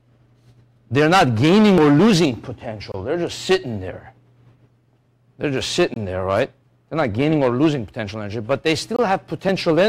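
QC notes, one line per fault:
2.92–2.94 s, 5.94–5.96 s, 8.96–8.99 s: gap between chunks. The sound stops for about 23 ms at each point, about every 3 s. Silence was inserted at the joins between 3-second chunks. Nothing is lost, but the flow breaks into short regular holes.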